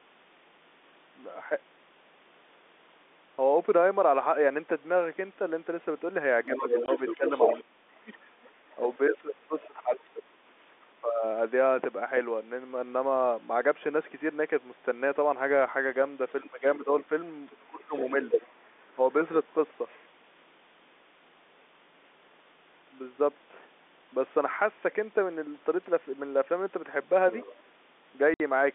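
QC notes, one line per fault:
6.47–10.0 s, 11.01–11.23 s and 16.43–18.99 s, speech suppressed in double talk. The talker's level dips while the far side talks, by about 25, 15 and 20 dB at worst. Roughly 1.5 s, 0.2 s and 0.7 s are affected. The echo canceller likely ducked both voices together.
6.57–10.86 s, 16.29–18.92 s, 19.89–20.0 s and 27.33–27.62 s, other side's voice leaking through. A second voice comes through the microphone path. It sits about 5 dB under the talker in the first two stretches, about 35 dB under at 19.9 s, and about 15 dB under at 27.3 s. The likely cause is loudspeaker echo the canceller did not fully remove.
6.86–6.88 s and 28.34–28.40 s, packet loss filled with silence. These are hard-edged holes of 20 ms and 60 ms. That fits one and then three lost 20 ms packets replaced with silence. The speech around the gaps is in the narrow 250 Hz to 3.6 kHz telephone band.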